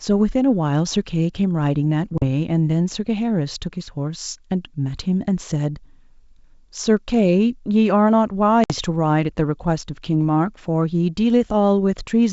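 Speech, carried over G.722 wideband coding, shows packet loss on an ADPCM call twice: a hard-edged silent hole of 40 ms between 2.18 and 2.26 s, and one of 60 ms between 8.64 and 8.73 s, each fitting a few lost packets. Unlike concealed loss or a simple dropout, the speech resumes slightly distorted, because the decoder's adaptive predictor and step size drifted from the sender's and take tens of milliseconds to realign.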